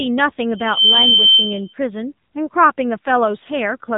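A speech recording that sounds buzzy, thin and synthetic throughout, with nothing above 3.8 kHz, points to the AMR narrowband mobile codec running at a low bitrate near 8 kbps. From 0.49 to 1.74 s a piercing 3.1 kHz tone swells in under half a second to roughly 10 dB above the speech: a loudspeaker feedback squeal, where the microphone re-amplifies its own loudspeaker output.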